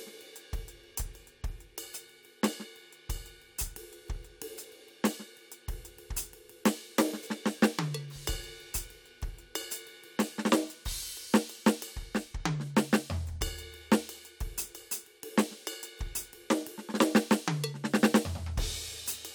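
No technical faults can be heard in this music at any point, so there is nothing to place in time order.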